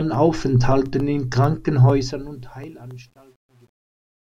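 From 1.74 s, as the speech fades out over the last few seconds, you get truncation distortion on the fade. The fade itself starts around 1.74 s and runs smoothly to the end at 4.35 s, but the gain stage is dropping bits with no dither, which fits a path holding only 10 bits. From 2.56 s onward it gets properly rough: the quiet tail turns gritty and the waveform collapses into coarse steps.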